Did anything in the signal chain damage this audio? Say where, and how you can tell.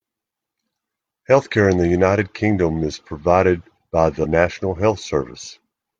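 Yes. At the codec stage, compressed frames were skipped at about 4.20 to 4.26 s, right after "is provided by". The speech jumps forward by roughly 100 ms, which fits about two missing frames of 42.7 ms each, dropped from the file or rejected by the decoder. Unlike a buffer dropout, there is no silent gap. The audio simply jumps ahead at the join, with the words on either side butted together.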